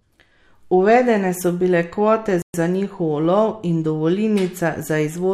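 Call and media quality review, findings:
Playback stall, 2.42–2.54 s: speech cuts out mid-flow for 120 ms, then resumes. Likely a player buffer underrun or blocked audio thread; output is held at silence until data arrives. Waveform: flat near-silent gap with abrupt edges. Spectrogram: clean vertical blank band across all frequencies, no decay tail.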